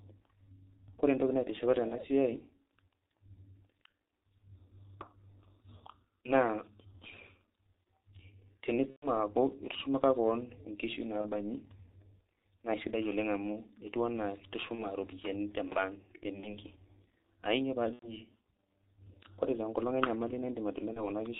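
Speech coded with the G.723.1 codec at heavy damage sounds muffled and hoarse with smeared consonants, which fits its 6.3 kbit/s mode; a spectrogram shows nothing above 4 kHz. VoIP packet loss concealed by the speech codec appears at 1.88–1.95 s after "entoki naitishipa", 8.90–9.09 s, 11.21–11.32 s after "itushumaka keon inkishu", 14.75–14.87 s, 16.40–16.59 s after "te bank", 17.93–18.14 s and 20.93–21.10 s. Each time, the decoder stretches its last pitch and filter into a fading buzzy tone or coloured noise. The spectrogram shows smeared, repeated harmonics, and the waveform shows a decaying envelope. The gaps at 8.90 s and 17.93 s point to several consecutive lost frames.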